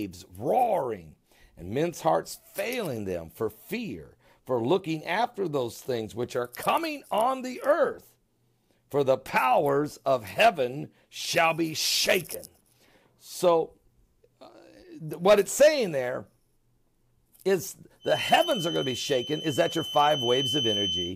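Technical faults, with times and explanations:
17.99 to 21.16 s, feedback whistle: a thin, single-pitch whistle at 3 kHz rings about 5 dB below the sound until the end. The likely cause is a loudspeaker-to-microphone loop held just short of feedback, so that one frequency keeps ringing without building into a howl.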